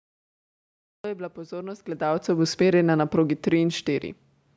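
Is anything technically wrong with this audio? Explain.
Yes, there are two faults. The first is a cut-off start: the recording or stream began late, so the clip holds digital silence from 0 to 1.04 s and then jumps straight into the middle of a sound, just before "je bila pozornost". The capture only started once audio was already flowing, so the first sound has no natural onset or fade-in. It arrives abruptly out of dead silence, cut mid-sound rather than beginning cleanly.

The second is automatic gain falling, from 1.93 to 4.16 s, right after "je bila pozornost". The automatic gain control judged the input too loud, or its background noise too strong for the gain it started with, and pulled its gain down, by about 5 dB over those two seconds. Because the whole signal is scaled together, the speech and the room noise behind it sink at the same rate. A talker moving away from the microphone would quiet the voice alone, as happens around 1.5 s and again near 4 s.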